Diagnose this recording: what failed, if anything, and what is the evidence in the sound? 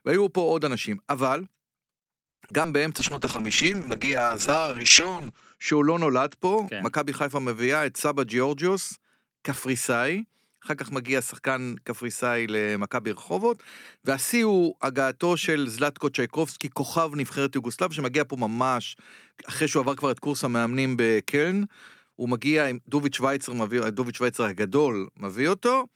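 The first fault is a short stall from a late packet, at the network and jitter-buffer stage, from 2.31 to 2.41 s. The speech holds one sound for about 80 ms and then carries on from the same point, so nothing is lost. The buffer ran dry, and the receiver stretched the last sound until the packet arrived, which adds 80 ms of delay. On a spectrogram the harmonics run flat and unchanging across that gap. The waveform shows a repeated, slightly decaying cycle.

Short concealed packet loss, also a network fault handled by the decoder, follows at 2.49–2.52 s and 2.62–2.80 s. The first hole loses about 20 ms behind 10 ms of fill, and the second loses 40 ms behind 20 ms of fill. The decoder extended the preceding sound from its pitch or as shaped noise, then cross-faded back into the real audio. Each one is heard as a brief smear or wobble. A spectrogram shows blurred, stretched harmonics with a soft seam where the real signal resumes.

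A call bitrate drop, in the call processing and codec stage, runs from 3.01 to 6.42 s. The sound turns rough, watery and muffled, and is at its worst for about 2.37 s. This fits the encoder being pushed from around 48 kbps down to about 8 kbps after the bandwidth estimate fell. At that rate Opus also cuts the audio band from 20 kHz to 8 kHz. On a spectrogram the energy stops at a sharp ceiling near 8 kHz, with patchy, coarse detail below it, until the full band returns.

A jitter buffer speed-up, in the receiver's buffer management, runs from 8.06 to 9.31 s. The speech plays about 6% fast with its pitch unchanged, so it sounds slightly hurried. The buffer held more audio than its target, and the receiver trimmed short pitch-period chunks many times in a row, removing roughly a tenth of a second in total. The waveform shows cycles that are subtly compressed, with small splice points. On a spectrogram the syllables look squeezed while the harmonic spacing stays the same.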